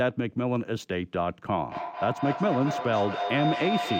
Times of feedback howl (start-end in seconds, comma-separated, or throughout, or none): 1.69-3.99